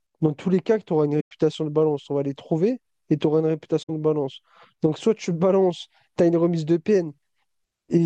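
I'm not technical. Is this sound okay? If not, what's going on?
No. The speech briefly drops to silence twice, from 1.20 to 1.31 s and from 3.82 to 3.90 s, fading softly out and back. This is AAC frame loss with muting: chunks of compressed audio went missing and the player filled the gaps with silence.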